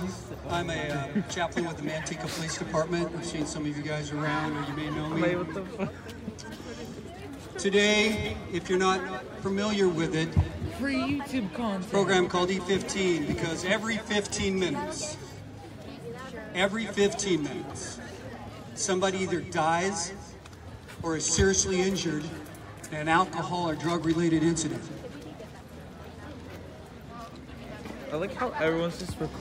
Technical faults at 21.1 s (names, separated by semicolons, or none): none